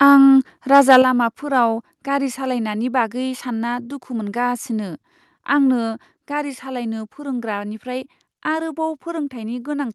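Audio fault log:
0.73–0.97 s, microphone overload: the loudest peaks are flattened and crackle harshly, likely from input gain about 5 dB too high, clipping roughly one sample in twenty.
1.02 s, microphone volume stepped down: voice and background drop abruptly by about 7 dB just after the distorted peak, likely an automatic input-gain reduction reacting to clipping.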